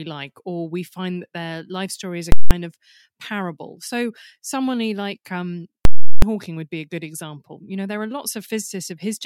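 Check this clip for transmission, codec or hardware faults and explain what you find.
Two faults stand out, both invalid numbers at full scale. The first runs from 2.32 to 2.51 s, about 186 ms. The second runs from 5.85 to 6.22 s, about 372 ms. In each, a calculation broke down and produced infinite or invalid values. These were clamped to the extreme sample value and held there for the block. The lengths fit 8192-sample and 16384-sample blocks. Each is heard as a very loud pop, then nothing, then another pop as the block ends.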